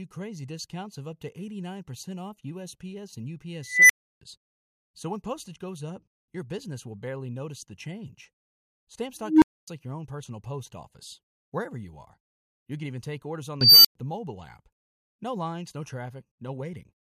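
An unstable filter, a recursive filter whose output runs away without limit, erupts three times in this speech: a tone swells over about a quarter second, clips, then cuts to silence. At 3.65 s it is a high squeal around 2 kHz, followed by 320 ms of silence. At 9.21 s it is a low tone near 300 Hz, followed by 256 ms of silence. At 13.61 s it is a shrill tone around 5 kHz, followed by 107 ms of silence.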